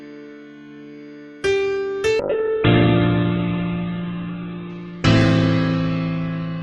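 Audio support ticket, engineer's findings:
Call bitrate drop, 2.2 s to end of clip. Bandwidth estimate collapsed, so the Opus encoder rate fell from 48 to 8 kbps, at its lowest for 2.25 s. Audio band cut from 20 kHz to 4 kHz. Sound turns coarse and muffled.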